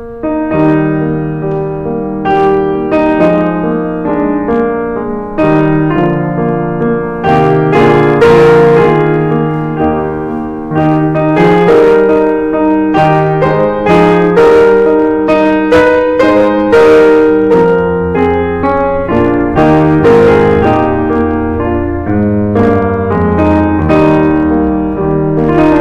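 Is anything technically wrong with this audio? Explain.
Yes. The music is hard clipped from start to finish. It was driven about 10 dB past what one stage could pass, so the peaks are sliced flat. Roughly one sample in twenty hits that ceiling. The flattened tops add high harmonics, heard as harsh fuzz on loud passages.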